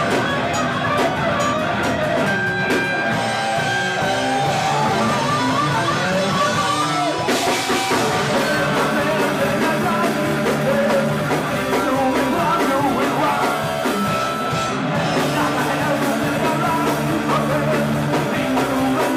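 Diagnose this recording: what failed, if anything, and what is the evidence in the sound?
Nothing failed here as far as I can hear: the audio holds together the whole way, with nothing in the sound pointing to trouble at any stage of the chain.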